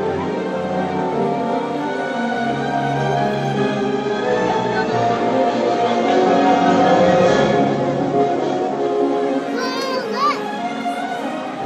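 The audio shows digital radio blending to analogue from 3.73 s to 9.13 s: the hybrid receiver lost its digital stream and cross-faded, over about 450 ms, to the station's FM broadcast, then blended back. During that stretch the level drops about 1 dB, and FM hiss sits around 30 dB below the signal. On a spectrogram the hiss appears as a raised broadband noise floor between those two fades. On a waveform it shows as a small step down in level.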